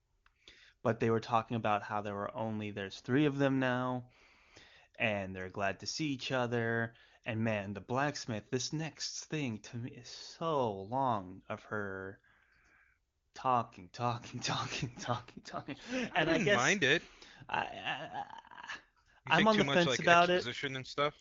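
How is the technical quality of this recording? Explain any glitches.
The speech is carried over an AMR wideband (HD Voice) link, with a clean wideband sound that points to its top 23.85 kbit/s mode, but it has two AMR rate drops. From 15.03 to 16.36 s, and from 20.2 to 21.2 s right after "the much fence like", the network forces a lower codec rate, consistent with about 8.85 kbit/s, trading bits for error protection. The speech turns rough and synthetic, with the same bandwidth and no gap.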